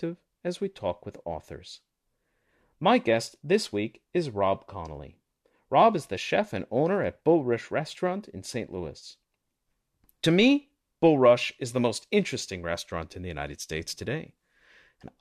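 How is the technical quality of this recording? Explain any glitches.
There's one glitch worth flagging, an AAC frame loss with concealment from about 8.99 to 9.04 s. Roughly 30 ms of audio went missing, consistent with three dropped low-delay frames, and the decoder bridged the gap by rebuilding it from the last good spectrum. That leaves a brief smeared, noisy patch rather than a hard dropout. Underneath, there's a light coding texture, likely from low-delay AAC compression.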